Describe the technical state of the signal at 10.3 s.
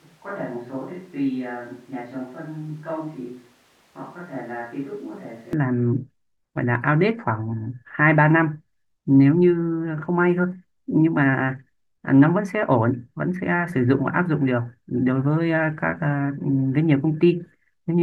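At 10.3 s the speech signal is intact, with no audible technical fault at that moment.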